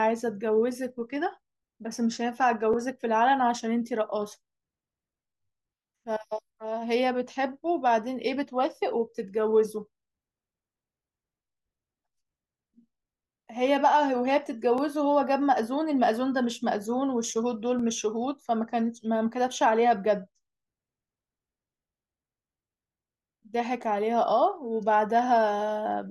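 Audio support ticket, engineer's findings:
Overlapping chunks: short stutters at 2.73, 8.76, 14.78, 17.79, 20.81 and 23.82 s, on a 3 s chunk grid. Each join replays about 12 ms of speech rather than dropping any, which separates it from a gap or dropout. Chunker/stitcher start offsets overlap the previous chunk.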